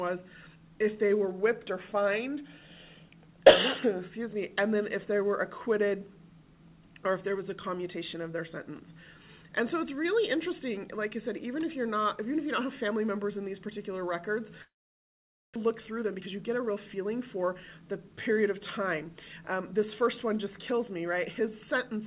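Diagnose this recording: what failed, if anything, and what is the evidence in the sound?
Long network dropout, 14.62 to 15.58 s, at the network stage: the receiver fills the gap with a brief fading continuation, then mostly silence, likely from lost packets, and 0.6 s never returns.

Jitter buffer speed-up, 15.66 to 18.39 s: the audio runs at 111% speed with unchanged pitch as repeated pitch-period cuts shed roughly 0.3 s of built-up delay.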